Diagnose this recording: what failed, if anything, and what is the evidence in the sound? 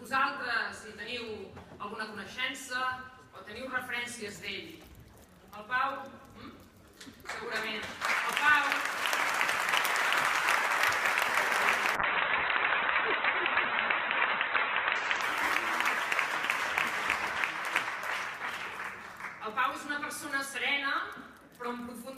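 At 1.27 s there is a single sharp tick: a block of digital silence about 0.67 ms long, which fits a 32-sample buffer left unfilled at the driver or buffer stage. It is distinct from a network dropout, which would be longer or concealed, because this cut to silence has hard edges and no fade.

From 11.96 to 16.79 s a call bitrate drop makes the audio rough and muffled, with the top end cut from 20 kHz to 4 kHz. The worst stretch lasts 2.76 s. The sound points to the Opus encoder being throttled from roughly 48 kbps to about 8 kbps. There are no gaps, unlike packet loss, only coarser coding until the bitrate recovers.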